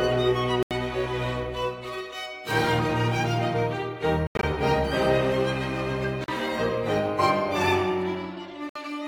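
Four clean holes cut into the music: at 0.63 s for about 81 ms, at 4.27 s where roughly 122 ms is lost in fragments spread to 4.43 s (longest gap about 81 ms), at 6.24 s for about 41 ms, and at 8.69 s for about 61 ms. The track resumes further on, as if it kept playing. That's likely a Bluetooth dropout, with late packets discarded. Gaps step in multiples of about 20 ms, which fits packets that size.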